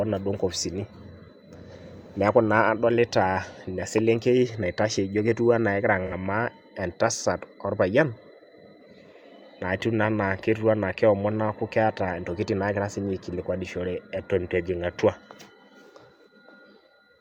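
A speech clip in which AAC frame loss with concealment occurs from 6.07 to 6.13 s: roughly 43 ms of coded audio, consistent with a single lost frame, was rebuilt by the decoder from the preceding spectrum, leaving a brief smeared, noisy and phasey patch in the speech.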